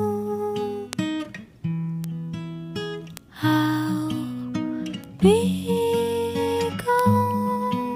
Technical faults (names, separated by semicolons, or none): bit error spike